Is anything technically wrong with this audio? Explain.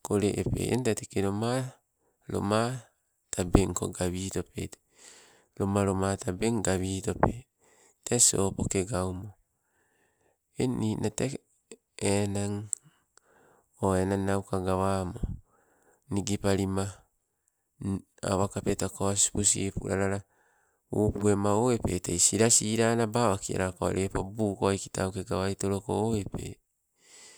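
No, nothing here stands out as a technical problem; the recording holds together fine all the way through.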